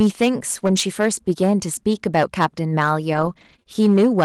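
Speech with clipping on its peaks throughout, which is hard clipping: the level is driven about 7 dB past what the chain can pass, so peaks are cut flat on a small share of samples. At 0.59 to 0.63 s there is a brief smear, a short concealed packet loss: about 20 ms never arrived, and the decoder extended the preceding sound to cover the hole. Straight after, from 0.63 to 0.77 s, the speech turns rougher and noisier. This is a lost packet rebuilt from error correction, where about 80 ms was replaced by low-bitrate copies carried in following packets, covering four separately lost packets. From 3.13 to 3.67 s the sound goes choppy and robotic, with pieces missing. That is repeated packet loss, with four separate gaps of up to 20 ms, about 80 ms in total, each patched by continuing the last sound, and around 200 ms of the stretch affected overall.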